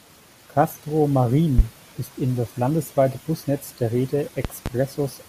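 A short speech clip with loud pops. The first lands at about 1.59 to 1.62 s, just before "ist in das landesweite", a single sharp crack peaking around 20 dB above the speech. The second, from 4.45 to 4.69 s, is a pair of thumps, a bit softer at roughly 15 dB. The speech carries on underneath both. A sudden voltage step got into the signal path, likely from a plug, switch, static discharge or driver glitch, and the downstream circuitry shaped it into these spikes.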